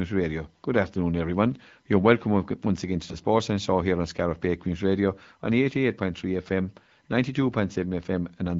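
Speech, carried over the AMR wideband (HD Voice) codec; its clear band-limited sound fits a rate of about 12.65 kbit/s. From 3.09 to 3.18 s, right after "welcome once again to", AMR bit errors cause a brief hoarse, gargly roughness. The burst spans roughly 84 ms, which fits about three 20 ms frames. A few percent of the weakly protected bits arrived flipped, so excitation pulses landed out of place and fine pitch, gain and spectral values went wrong. Pitch and level hold roughly steady while the texture turns scratchy.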